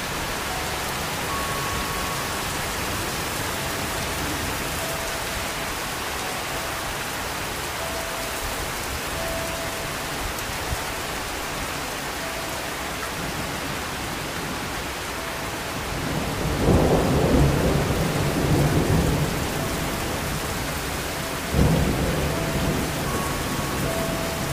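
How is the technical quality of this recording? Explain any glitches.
No glitches or technical faults can be heard anywhere here.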